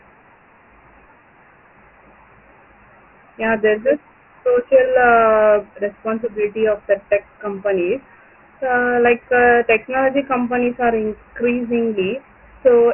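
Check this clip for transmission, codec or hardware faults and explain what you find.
The speech carries a gritty, grainy hiss that rides along with every syllable for the whole clip, and nothing reaches above about 3.3 kHz, so the sound is narrow and dull. This is Dialogic VOX ADPCM, a 4-bit adaptive coding used for phone menus and voicemail. At 24 kbps it fits 6,000 samples a second, and the coarse quantisation steps leave heavy, signal-following noise.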